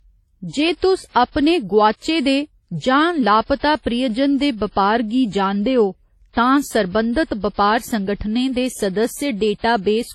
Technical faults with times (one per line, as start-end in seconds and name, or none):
0.00-10.15 transcoding between lossy codecs